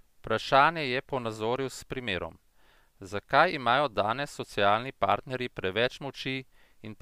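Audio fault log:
No audible faults were found in this speech clip.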